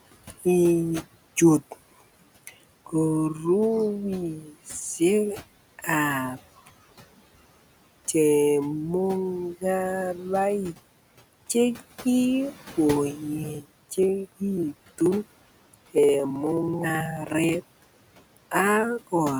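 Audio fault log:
throughout: noise suppressor artifacts. The suppressor treats the steady background as noise and pulls those bands down by about 17 dB, frame by frame. Because the room noise sits only about 19 dB under the speech, the cut is deep relative to the gap, so the background dips in the pauses and swells back under each phrase.
0.24–0.46 s and 4.42–4.53 s: speech cut by the noise suppressor. In both spots the suppressor mistakes quiet parts of the speech for background and turns them down along with it, roughly a tenth of a second of sound each time. The first is the stronger, dropping by as much as about 16 dB, so soft sounds there come across as swallowed. The second dips only about 6 dB and leaves that stretch faint rather than gone.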